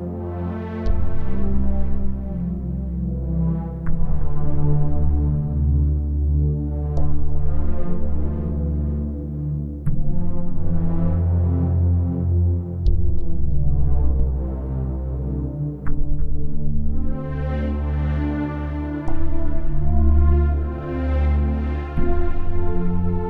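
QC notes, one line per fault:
14.20–14.27 s, phantom power thump: a deep thump peaking at about -7 dBFS that decays in 16 ms. A supply was switched on or off on the live input, and the voltage step passed through the coupling capacitors as a low-frequency pulse.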